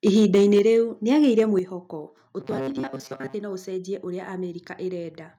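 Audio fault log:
0.07–0.59 s and 1.27–1.40 s, microphone overload: The loudest speech peaks take on a harsh, crackling, gritty edge, stronger in the first stretch than the second. The first burst drives about 4 dB past full scale, flattening roughly one sample in twenty. The second is about 2 dB over, with only a few percent of samples cut. The cause is likely an input level set too high, so the converter clips off the tops of the waveform.
0.59 s and 1.59 s, microphone volume stepped down: Both the speech and the background suddenly drop in level, as if someone turned a knob down in one go. The first drop comes right as the first distorted stretch ends and is about 4 dB. The second, a little after the later distortion, is deeper at about 7 dB. This is likely the call software noticing the overloaded input and cutting the microphone's input volume in single steps.
2.40–3.34 s, robotic sound from repeated short buffers: The speech turns into a rigid, metallic buzz locked at 134 Hz. 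It still roughly follows the rhythm of the talking, but most of the real audio in this stretch is missing. The likely cause is audio arriving too late, so the software keeps replaying a tiny chunk of about 7.5 ms instead. That chunk length fits the buzz frequency, and the constant repetition forces that fixed pitch onto the sound.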